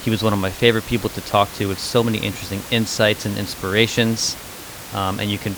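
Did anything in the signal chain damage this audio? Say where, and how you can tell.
No, nothing in the chain has hurt this speech, and the room noise sitting about 15 dB under the voice is just the space the microphone was in.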